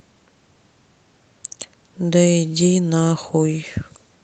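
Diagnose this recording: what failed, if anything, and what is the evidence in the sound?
Nothing failed: the speech shows only the expected traits of a call chain, microphone processing and an Opus call path with content stopping at 8 kHz, with no dropouts, clicks, distortion or timing breaks anywhere in the recording.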